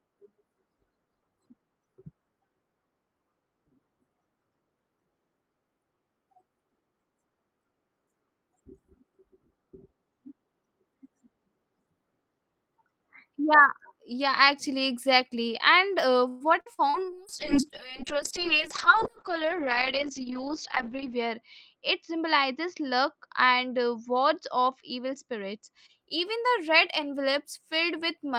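At 16.28 s the speech halts in a call audio freeze: for about 0.12 s the last sound carries on as a fading buzz, likely from delayed packets emptying the jitter buffer. Unlike a skip, nothing is lost; it resumes where it stopped.

At 16.60 s comes a skip ahead. Roughly a tenth of a second of speech is simply gone, and the two sides are butted together with barely any filler, so it reads as a jump rather than a pause.

Two short concealed packet losses follow at 16.74 to 16.81 s and 16.90 to 16.97 s. Each replaces about 40 ms with a continuation of the preceding sound, heard as a brief smear rather than a gap or jump.

From 16.99 to 17.17 s a jitter buffer slow-down repeats pitch periods, adding about 49 ms. The speech drags to roughly 78% speed while keeping its pitch.

At 17.07 s a call bitrate drop sets in, falling from 32 to 7 kbps, with the bandwidth narrowing from 20 kHz to 8 kHz. The speech turns muffled and rough, staying at its worst for about 4.2 s and clearing by 26.08 s. 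This is a lasting change in tone, not a momentary glitch.

Within that stretch, from 18.60 to 20.29 s, a jitter buffer speed-up trims short pitch-period pieces, removing roughly a tenth of a second. The speech runs about 5% faster at the same pitch, sounding slightly hurried rather than clipped or jumpy.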